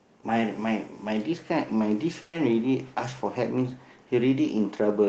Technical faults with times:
2.21-2.35 burst of packet loss

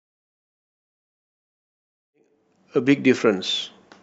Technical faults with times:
none

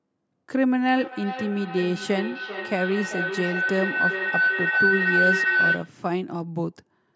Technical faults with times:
0.87-6.00 feedback howl

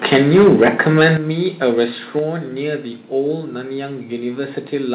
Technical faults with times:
0.04-1.11 microphone overload
0.16 microphone volume stepped down
1.17 microphone volume stepped down
2.19 microphone volume stepped down

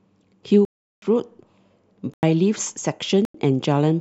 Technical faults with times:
0.65-1.02 block of digital silence
2.14-2.23 block of digital silence
3.25-3.34 block of digital silence

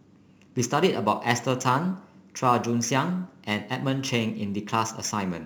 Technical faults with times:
0.00-5.46 crude rate conversion

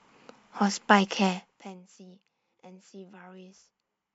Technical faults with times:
1.27-1.80 zipper noise

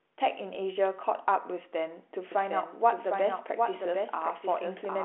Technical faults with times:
2.32-5.04 doubled audio track

